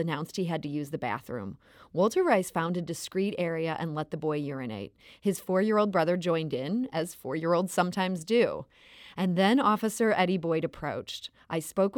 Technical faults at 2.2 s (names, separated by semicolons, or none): none